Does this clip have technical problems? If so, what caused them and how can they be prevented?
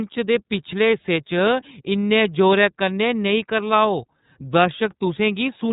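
Yes. The speech passed through the iLBC codec throughout, coding each 30 ms frame independently at 13.33 kbps, so nothing above 3.8 kHz survives and the voice sounds plainly rough and slightly synthetic. Sending it over a wideband codec such as Opus would prevent this.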